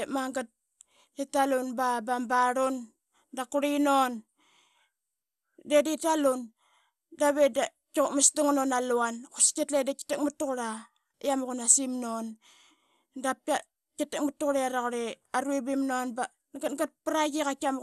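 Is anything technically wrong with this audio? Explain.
Yes. Throughout the speech there is audible MP2 compression damage: nothing is present above about 12.2 kHz, and the remaining sound has a gurgling, granular roughness. This is likely MPEG Layer II coding at a low rate, consistent with around 80 kbps. Starved of bits, the codec switches off its upper sub-bands and coarsely quantises the rest. Unlike a plain low-pass filter, the dullness comes with grainy, flickering distortion.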